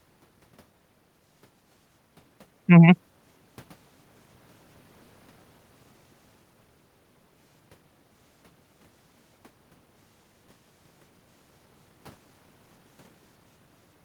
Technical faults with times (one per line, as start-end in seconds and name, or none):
none